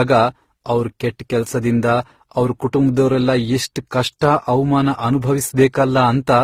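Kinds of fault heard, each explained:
Transcoding between lossy codecs: Across the whole speech clip, several distinct kinds of coding damage sit on top of one another. A smeared, synthetic-sounding top end and a grainy, coarse texture are heard together with the milder warble of a final AAC-LC-style encode, and nothing is present above 16.5 kHz. One low-bitrate encode gives a single consistent artefact signature, but here the textures differ and stack. That points to a chain, likely a low-rate HE-AAC stage, then Opus, then AAC-LC.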